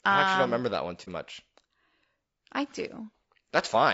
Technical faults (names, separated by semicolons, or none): low-delay AAC compression; AAC frame loss with muting